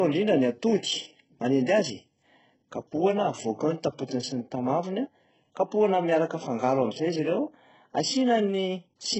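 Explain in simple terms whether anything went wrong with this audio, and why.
The speech was most likely squeezed hard by HE-AAC compression, which stores only the lower pitches and fakes the treble by copying them upward. Throughout the clip, nothing real survives above 8 kHz, so s sounds come out gritty, lispy and metallic.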